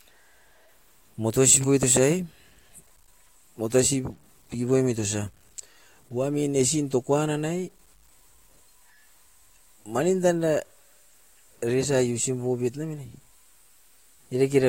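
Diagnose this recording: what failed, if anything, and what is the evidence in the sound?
Sample-format conversion likely reduced the speech to a low bit depth without dither, with truncation to 9 bits fitting the sound. Throughout, grainy distortion follows the signal about 35 dB down, roughening quiet passages, while the softest moments sputter between steps or vanish.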